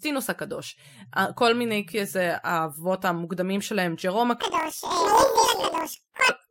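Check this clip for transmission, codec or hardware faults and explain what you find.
There's one fault: from 4.41 to 6.30 s the speech suffers planar audio read as interleaved. Each 26.12 ms block stores all left samples then all right, but gets read as alternating pairs, so it plays twice at double speed. It comes out an octave high, fluttering at 38.3 Hz.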